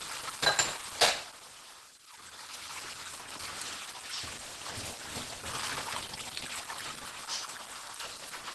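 A sound recording with Opus compression throughout, likely from a low-rate hybrid mode. It sounds muffled, hoarse and grainy, with nothing above 12.1 kHz, which fits roughly 16 kbps.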